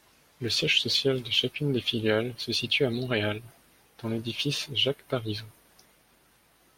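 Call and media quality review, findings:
No faults found in the speech clip. Nothing to log against any component on this ticket.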